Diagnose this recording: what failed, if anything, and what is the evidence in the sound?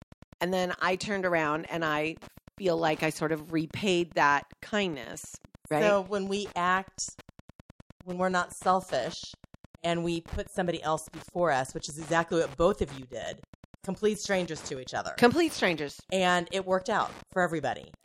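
Wi-Fi interference is getting into the analogue wiring: a nearby Wi-Fi radio is coupling into the audio circuit, and the circuit rectifies its beacon transmissions into the audio band. The result is a steady tick repeating every 102.4 ms, roughly ten times a second, running underneath the speech for the whole recording. It sits about 25 dB below the speech, so it is most obvious in pauses, where the regular clicking is heard on its own.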